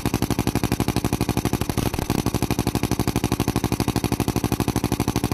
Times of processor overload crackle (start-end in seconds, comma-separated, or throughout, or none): 1.61-2.41